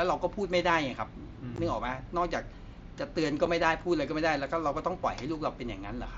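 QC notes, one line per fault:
1.56–1.58 s and 3.45 s: unconcealed Bluetooth headset packet loss. Hard-edged silent gaps of 15 ms and 7.5 ms, left unfilled rather than smoothed over as concealment would.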